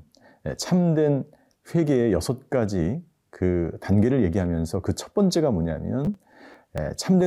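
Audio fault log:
6.05–6.78 s: processor overload crackle. The processor fell behind and missed a run of short audio deadlines, about fifteen across the stretch, which fits buffers of roughly 10 ms. Each missed slice was skipped outright, leaving hard-edged gaps that pile up into a gritty crackling tear across the speech until the load eases.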